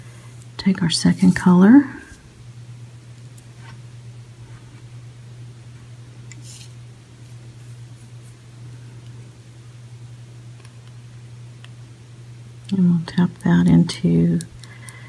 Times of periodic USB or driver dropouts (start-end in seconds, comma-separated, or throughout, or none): none